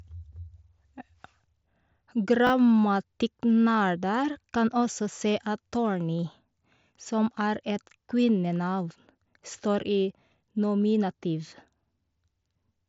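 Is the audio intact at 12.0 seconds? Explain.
Yes, the audio is intact at 12.0 seconds, with no fault at that moment.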